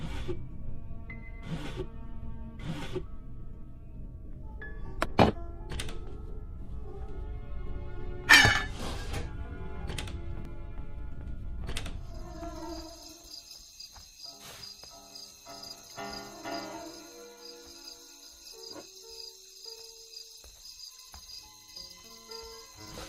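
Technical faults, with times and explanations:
No technical faults detected.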